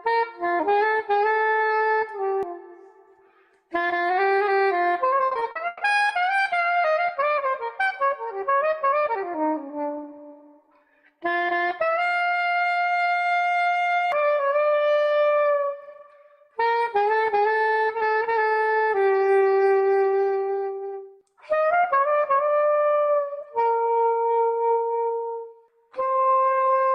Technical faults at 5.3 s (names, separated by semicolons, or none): repeated packet loss (robotic sound)